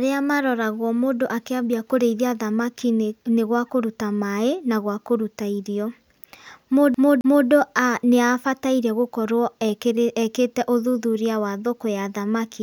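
At 6.94 s the speech catches like a CD stuck on one turn. A 266 ms slice plays twice with a brief mute at each jump, ending at 7.48 s.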